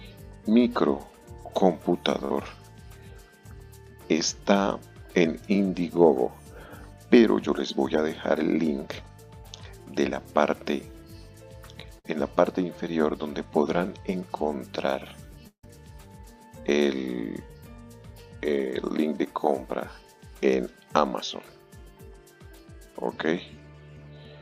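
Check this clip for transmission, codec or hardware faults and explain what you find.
Three transmission faults are audible, and all of them come from missing network data.

Burst of packet loss at 2.25–2.31 s and 11.99–12.05 s: several packets in a row never arrived. The receiver extended the last sound for 45 ms and 53 ms, fading it as a short buzz or hiss. Playback then resumes with 40 ms and 60 ms of audio skipped.

From 15.47 to 15.64 s, the sound is stretched into a fading buzz or hiss for 158 ms, and 90 ms of that is near silence. It then returns with 160 ms missing. The likely cause is a long network dropout, in which nothing arrived for that stretch.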